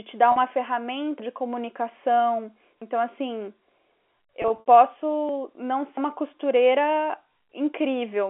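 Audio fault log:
0.32–0.36 s and 4.42–4.66 s, packet loss with pitch repetition: after "te dar", 40 ms is bridged by repeating the last pitch period, which sounds like a brief buzzy hold. Later, 120 ms of losses scattered over 240 ms, with runs up to 60 ms, give several held, fading stretches. On a spectrogram these show as frozen, evenly spaced harmonic stripes with no formant movement.
1.20, 2.82, 5.29, 5.97 s, dropped buffer (overrun): each is a jump with the sound skipping ahead by about 100 ms, or about 150 ms at 5.29 s. The first falls just before "de comunicação" and the second just after it. A likely overrun discarded unread samples and spliced the edges together. The waveform shows an abrupt discontinuity with no gap, and the spectrogram shows a thin vertical broadband line.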